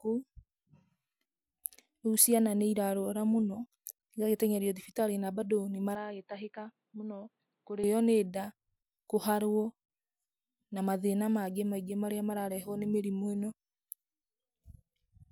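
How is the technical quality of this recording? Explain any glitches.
The recording has one clear glitch, in the middle of the speech. From 5.95 s to 7.84 s, right after "thibitarĩ na mbandũ nĩ", the sound turns dull and boxy. Nothing comes through above about 4.7 kHz, the level falls by roughly 5 dB, and a new background noise appears, sitting about 45 dB below the speech. There is no silence at the changeover. The likely cause is the input switched to a poorer device that passes a narrower band. What sets this apart from a plain low-pass filter or a drop in codec bandwidth is that the tone, the loudness and the noise floor all change together, and then all recover together.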